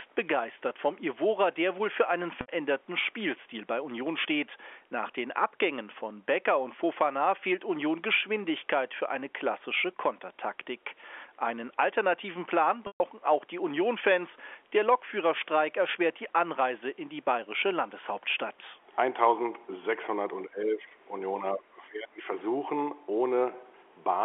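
Packet loss with pitch repetition at 2.41–2.48 s (70 ms) and 12.87–13.00 s (130 ms): lost packets, consistent with 10 ms frames, are bridged by repeating the last pitch period, heard as a held, buzzy tone that fades out. Speech suppressed in double talk at 20.49–20.97 s and 21.40–22.29 s: the speech dips by about 10 dB, then about 20 dB, likely because the echo canceller attenuated it while both sides talked.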